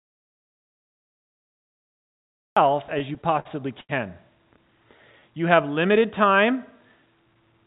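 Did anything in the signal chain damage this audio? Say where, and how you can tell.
Yes. An audio dropout to silence runs from the start until 2.57 s. The waveform is a flat silent line with no room tone, likely from lost input at the device or driver stage.

Repeated stalls (stutter) between 2.94 and 3.91 s point to the network and jitter buffer. Eight late-packet gaps, the longest 79 ms, are filled with continued sound, which shows as smeared horizontal streaks on the spectrogram. Nothing is lost, but the speech drags.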